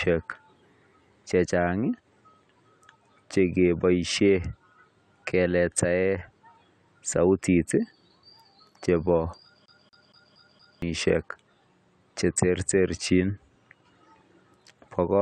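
At 9.66 s the speech locks into the stutter of a CD stuck on one turn, lasting until 10.82 s. A damaged spot on the disc knocks the laser back one track each revolution, so the same 233 ms slice of audio plays five times over, with a brief dropout at each jump. The result is a fast, evenly spaced repetition, the familiar mechanical skip of a scratched compact disc.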